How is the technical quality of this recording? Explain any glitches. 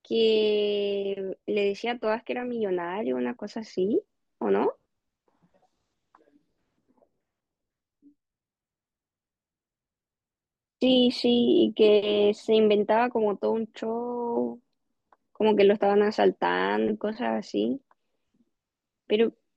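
No technical glitches are audible.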